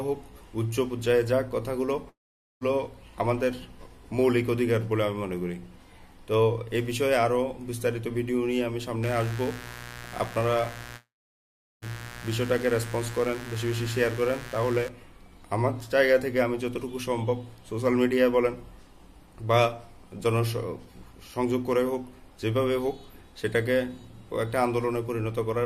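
From 2.09 to 2.63 s a long network dropout, likely from lost packets, removes about 0.52 s. A brief fading buzz gives way to near silence, a flat gap in the waveform.

From 9.03 to 14.88 s a raspy 60 Hz mains buzz sits about 15 dB below the signal. Switching spikes show as evenly spaced harmonic lines reaching into the kHz range.

Within the buzz, from 10.97 to 11.84 s, a second dropout loses about 0.86 s. The gap is mostly blank, with audio resuming further on.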